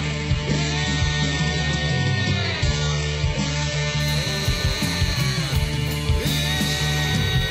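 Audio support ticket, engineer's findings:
Adaptive stream starting at a low bitrate, 0.0 to 4.0 s. Dull, band-limited sound, nothing above 8 kHz, with stronger codec artefacts and missing top end. Abrupt quality jump at 4.0 s, no gap or dropout. The character fits a very low HE-AAC rendition, near 8 kbit/s, switching to an AAC-LC rendition near 96 kbit/s. Component: player's adaptive bitrate logic. It opened on the cheapest rendition for fast startup, then stepped up once throughput was measured.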